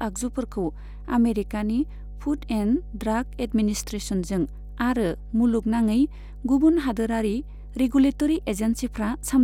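Speech with mains hum running the whole way through: a steady 50 Hz tone, around 15 dB under the voice, from a ground loop or a nearby transformer.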